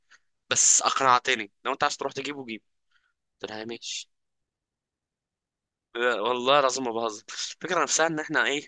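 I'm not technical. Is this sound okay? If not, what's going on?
Yes, this recording is fine, with no technical problems to point out. You don't need to do anything about it.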